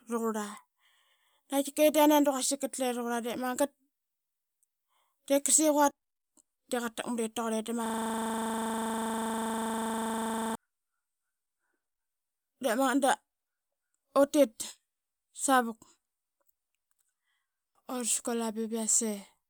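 At 7.86 s the speech stops moving forward and a system hang loop takes over until 10.55 s. The computer or its audio driver froze. The sound hardware kept replaying the same ring buffer. One 40 ms slice of audio repeats exactly, which fits a 40 ms buffer. It cycles 25 times a second, about 67 times in all. The result is a rough, rapid stutter, close to a buzz at 25 Hz.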